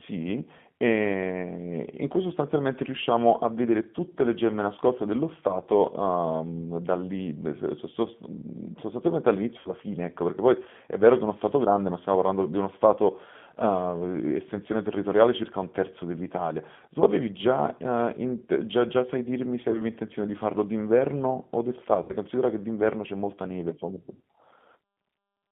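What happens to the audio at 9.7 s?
Right around 9.7 s a short gap in the stream is being covered by VoIP packet loss concealment in the speech codec. The disturbance runs from about 9.59 s to 9.71 s. Roughly 60 ms of audio is missing, which fits three consecutive 20 ms packets. Instead of leaving silence, the G.729 decoder keeps regenerating sound from its last pitch period and vocal tract filter, turning the gain down frame by frame. What you hear is a brief stretched sound, a buzzy tone or coloured noise, that fades. Because each frame depends on the one before, the sound stays weak or distorted for tens of milliseconds or more after real packets return at 9.71 s. That is what separates it from a hard dropout or a click: there is no abrupt silence or edge, just a synthetic smear that decays and then recovers.

The whole clip is also carried over the G.729 codec at 8 kbit/s, limited to a band of about 150 Hz to 3.5 kHz. 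This is plainly audible as a thin, slightly rough and synthetic quality from the model-based reconstruction. It is a constant coloration, whereas the damage at 9.7 s is a brief, fading disturbance.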